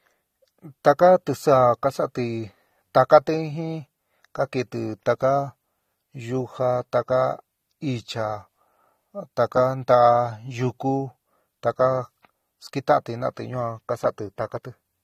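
Speech marred throughout by AAC compression, likely low-bitrate AAC-LC around 32 kbps: dull, smeared, warbling sibilants, and a spectrogram shows nothing above 14.7 kHz.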